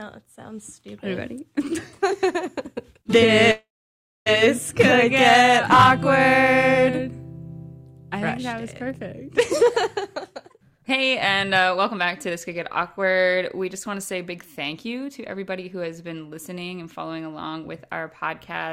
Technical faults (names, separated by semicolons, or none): call audio freeze; jitter buffer speed-up